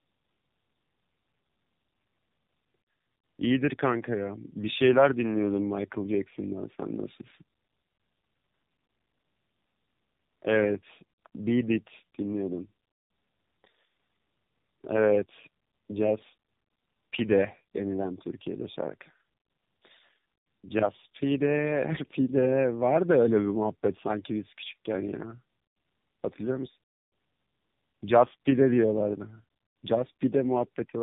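Speech with tandem speech coding throughout: two low-rate AMR-type coders, the second re-coding the first's output, leave it rough, warbly and empty above 3.8 kHz.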